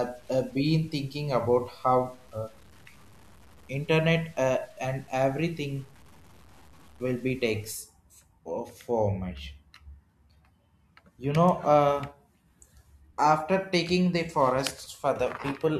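From the start to 7.75 s, the speech sounds grainy and rough. This is low bit depth without dither, likely from truncating to 8 bits. The error tracks the signal. Quiet passages turn gritty, and the faintest sounds sputter or vanish. The noise sits about 30 dB below the speech.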